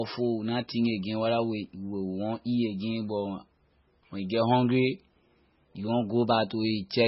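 From start to finish the speech has likely passed through MP3 compression at a starved bitrate, with heavy damage that fits something near 16 kbps. Short of bits, the encoder discarded everything above 5.6 kHz and zeroed weaker frequency lines, which flicker on and off between frames. The result is dull, band-limited speech with a watery, swirling texture, metallic chirping on s sounds, and smeared, softened consonant attacks.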